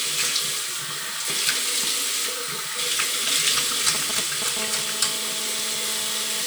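From 4.59 to 6.42 s, GSM phone buzz: a nearby handset's 217 Hz call bursts get rectified into a steady raspy buzz about 15 dB below the sound, drawn on a spectrogram as evenly spaced harmonic lines.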